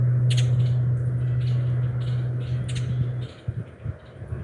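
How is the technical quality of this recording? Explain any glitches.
The recording has one fault, present throughout. Wrong sample rate: everything runs 1.5 times too fast and about 7 semitones high, which fits 16 kHz material played back at 24 kHz without conversion.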